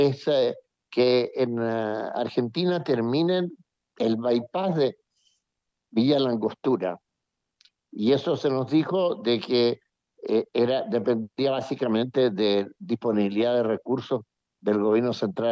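No technical faults can be heard at any point in the audio.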